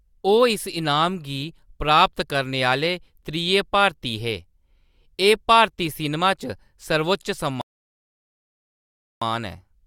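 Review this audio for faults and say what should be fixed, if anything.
A rebuffering stall occurs at 7.61 s: the speech stops abruptly and silence holds until 9.22 s, about 1.6 s, before the audio picks up at exactly the point where it broke off. The player drained its buffer of downloaded audio and had to wait for more data to arrive. No content is skipped or repeated; the gap is pure added time inserted into the playback timeline. To prevent it, keep a deeper playback buffer or lower the streaming bitrate so delivery stays ahead of consumption.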